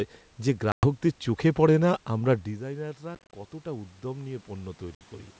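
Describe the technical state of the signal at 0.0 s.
The audio is intact at 0.0 s, with no fault present at that moment.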